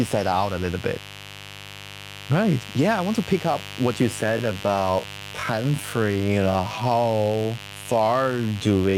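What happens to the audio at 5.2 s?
At 5.2 s the speech is dragged out, yet its pitch stays where it was. This is a time-stretched section running from 4.22 s to the end at 8.97 s, playing at about 0.58 times the original pace. The likely cause is software stretching the passage to fill a longer length, repeating short pieces of the audio to slow it without lowering the pitch.

Under the speech, a steady, raspy mains buzz sits about 15 dB below it. It comes from the 50 Hz supply: sharp switching spikes, twice per mains cycle, from something like a dimmer, rectifier or unshielded cable leak into the signal. They produce a dense stack of 50 Hz harmonics reaching up to several kHz, which gives the buzz its harsh edge.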